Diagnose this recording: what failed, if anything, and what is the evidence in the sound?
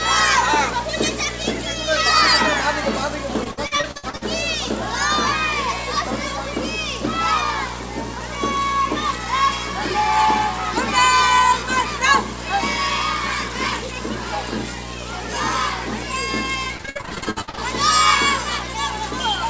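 The analogue wiring is picking up video or display buzz for the whole recording: a 60 Hz field-rate buzz with hash on top, sitting only about 10 dB under the wanted sound. A screen or video cable is coupling into the audio lines. Nothing reaches above 8 kHz, consistent with a G.722 call path.

Repeated packet loss (robotic sound) on the network side shows up twice, 3.44–4.23 s and 16.77–17.59 s. Both spans turn choppy, with holes up to about 60 ms each patched by stretching the previous sound, concealment covering 42% and 55% of those stretches.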